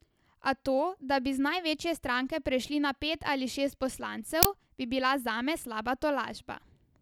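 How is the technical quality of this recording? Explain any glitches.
The recording has one clear glitch, an uninitialised buffer fault from 4.43 to 4.45 s. It sounds like a sudden, loud burst of harsh digital noise, about 21 ms long, starting abruptly and stopping just as sharply. The cause is a block of audio being played before any samples were written into it, so whatever data was left in that memory came out as sound. The burst's length fits a 1024-sample buffer.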